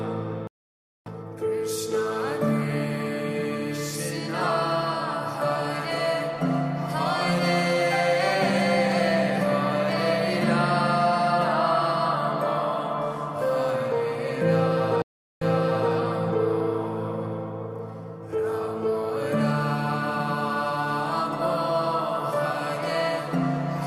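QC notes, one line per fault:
0.47–1.09 s, stream reconnect: the sound drops out for about 0.59 s and returns roughly half a second further on, so a short stretch is skipped. The connection broke and a fresh decoder joined the live stream later, starting with a brief muted or faded first frame.
15.02–15.93 s, stream reconnect: a 0.39 s silence, after which the audio resumes 0.52 s earlier than where it stopped, so that portion is heard twice. On reconnecting, the server resent a burst of already-played audio to the new decoder.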